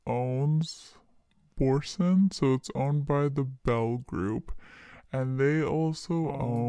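Speech, and the whole thing plays back slow and low, about 0.69x speed and roughly six and a half semitones down, the classic wrong sample rate sound, which fits 32 kHz material being played at 22 kHz.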